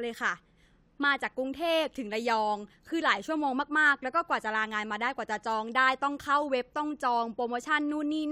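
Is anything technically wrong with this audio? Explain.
No, the signal shows no technical faults at any point in the recording.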